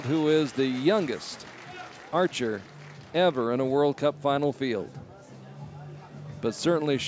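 No technical faults are audible.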